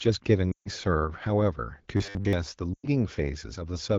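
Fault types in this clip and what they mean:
lost AMR speech frames: Frames failed their checksum, so the decoder stretched the last good speech with falling gain. Two dropouts of 140 ms and 100 ms drop to near silence within two frames.
robotic sound from repeated short buffers: Audio likely arrived too seldom, so a short buffer was replayed. From 1.97 to 2.33 s speech becomes a rigid metallic buzz at 100 Hz, fitting 10 ms repeats.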